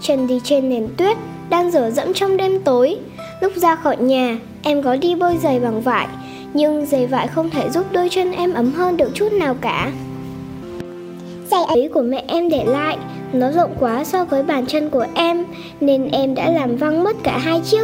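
A section at the wrong speed, 10.63 to 11.75 s, sounds hurried and about five semitones high: 1.34 times fast, likely from a clock mismatch.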